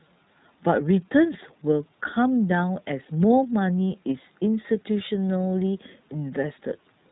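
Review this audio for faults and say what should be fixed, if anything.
The speech carries iLBC codec damage from start to finish. Nothing above 4 kHz survives, so it sounds narrowband. Each frame's excitation is coded on its own, which leaves a plainly audible rough, synthetic edge. The sound fits the 30 ms mode at about 13.33 kbps. To prevent it, record or transmit through a wideband codec, or uncompressed audio, instead of iLBC.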